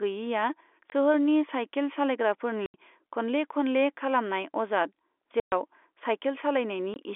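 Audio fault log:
0.90–0.92, 2.66–2.74, 5.40–5.52 and 6.94–6.96 s: packet loss filled with silence. There are dead holes of 20, 80, 120 and 20 ms, all multiples of 20 ms, so this fits 20 ms packets dropping out. The first one lands right before "सोहोरनि साइखेल".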